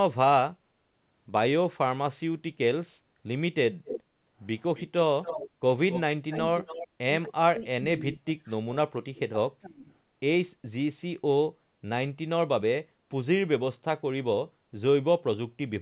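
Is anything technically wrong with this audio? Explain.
Yes, three kinds of fault are audible in this speech.

Echo leak appears at 3.85 to 4.02 s, 4.75 to 4.85 s, 5.24 to 5.49 s and 5.90 to 6.87 s. It is likely caused by the far end playing the call over a loudspeaker while its echo canceller failed to remove everything its microphone captured, so that residue came back down the line. The result is a delayed copy of the speech trailing about 270 ms behind. It sits roughly 10 dB below the main speech in most places and closer to 20 dB below at 4.75 s.

Background gated by the echo canceller occurs from 5.49 to 5.61 s. While the loudspeaker signal was active, the canceller pulled the microphone level down hard to keep echo out, and the room sound went with it. The ambience dips by about 12 dB for roughly a tenth of a second, then comes back once the canceller releases. Because the drop is so brief, it sounds like a small hole punched in the background.

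Speech suppressed in double talk affects 6.19 to 6.95 s and 7.27 to 9.92 s. The likely cause is both sides speaking at the same time, which left the canceller unable to tell the local talker from the loudspeaker echo, so it attenuated everything. The voice drops by as much as about 30 dB. This adds up to roughly 0.3 s in the first stretch and around 2 s in the second.

Throughout the clip, the band stops at 4 kHz, which is consistent with a G.711 A-law call path.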